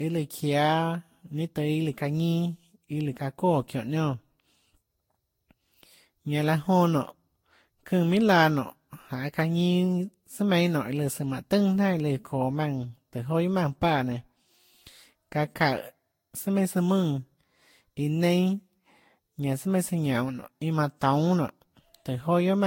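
Throughout the speech, the sound is swirly, smeared and hollow, with consonant attacks blurred. This points to generation loss: the audio was likely decoded and re-encoded about five times with a lossy codec, consistent with Vorbis near 60 kbit/s. Each pass requantised on a shifted frame grid, so noise and holes accumulated. A spectrogram shows nothing above 16.6 kHz, patchy gaps and smeared onsets. The waveform's transients look softened.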